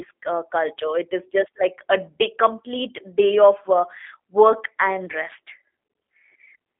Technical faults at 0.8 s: G.729 codec

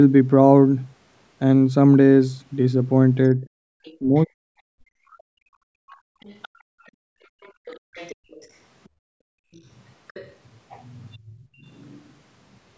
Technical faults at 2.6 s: none

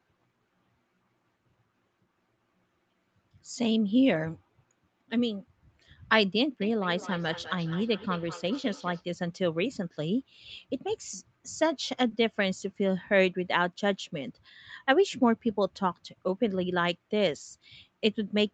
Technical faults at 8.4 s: feedback echo between two devices

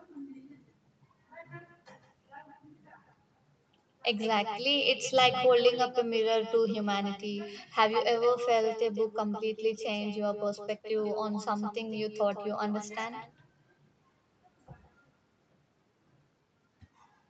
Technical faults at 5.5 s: echo with no canceller

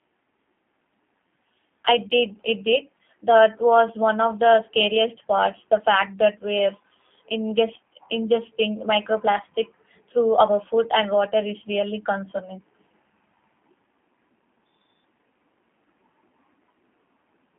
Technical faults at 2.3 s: G.729 codec

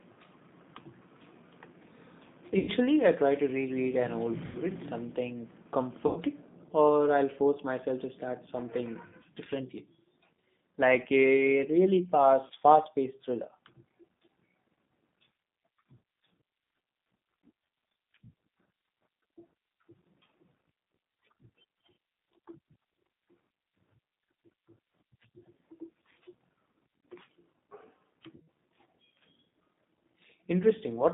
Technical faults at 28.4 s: G.729 codec; VoIP packet loss concealed by the speech codec

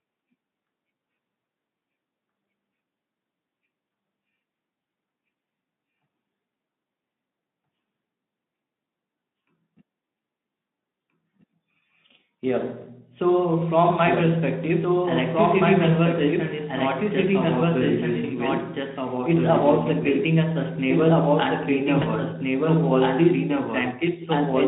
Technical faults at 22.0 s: doubled audio track; VoIP packet loss concealed by the speech codec

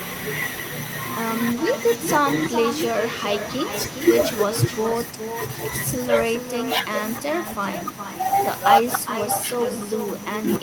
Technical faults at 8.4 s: echo with no canceller

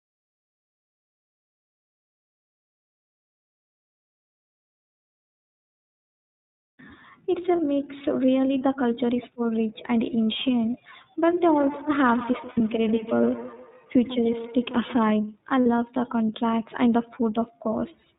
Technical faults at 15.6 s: iLBC codec; lost iLBC frames

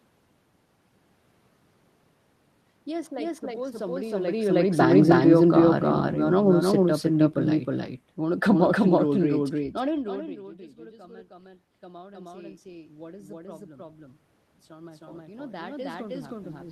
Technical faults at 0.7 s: doubled audio track

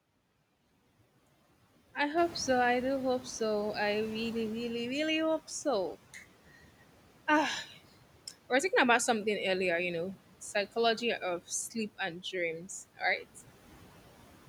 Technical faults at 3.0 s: noise suppressor artifacts; noise suppressor catching up

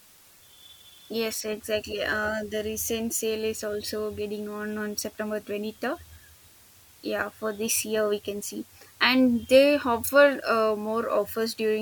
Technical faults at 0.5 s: low bit depth with dither

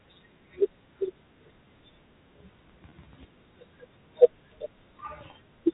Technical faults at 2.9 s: packet loss with pitch repetition

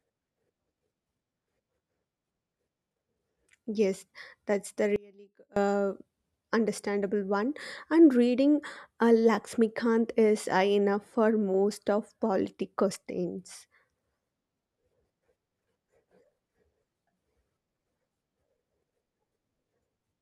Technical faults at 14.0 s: none

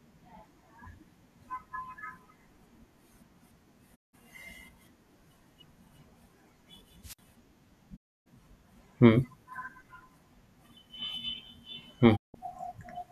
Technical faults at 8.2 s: digital broadcast dropout

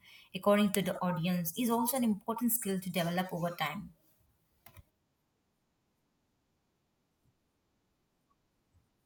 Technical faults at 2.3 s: none

